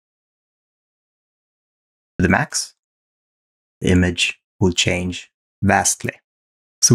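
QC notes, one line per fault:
0.00–2.20 s, audio dropout to silence: the clip opens already in a dead gap, with silence and no trace of room tone for the first 2.2 seconds, then the sound enters abruptly mid-flow rather than starting naturally. Such a dead gap points to the input having been lost while the recorder kept writing, likely from a disconnected device, a failed link or a stray mute, so whatever preceded that entry is missing.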